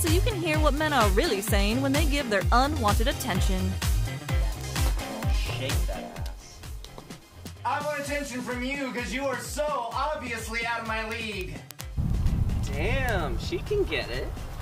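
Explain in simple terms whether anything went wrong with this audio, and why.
Something did go wrong: from 0.17 s to 14.57 s there is a steady stream of sharp clicks, about ten every second and around 150 in total, some louder than others. These are word clock ticks. The receiving device ran on its own clock instead of following the sender's, and the two drifted apart by about 200 parts per million. Each time they slipped past each other, a single sample was lost or doubled, leaving a tick.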